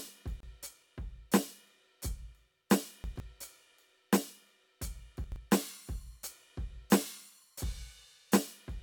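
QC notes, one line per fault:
0.40–0.43 s, gap at a join of encoded pieces: the music stops dead for about 28 ms and then resumes exactly where it left off. The edges are smeared, as happens when separately encoded pieces are joined without trimming the encoder's start delay and end padding. Unlike a dropout, no music is lost. The flow is simply paused for a moment by a short stretch of silence.
3.04–3.20 s and 5.24–5.36 s, chunks out of order: each span sounds briefly jumbled. A 40 ms chunk arrived late and plays after the chunks that should follow it, three chunks late in the first span and two in the second. There is no silence and nothing missing, which sets this apart from a gap or dropout. The music is all there but scrambled for a fraction of a second.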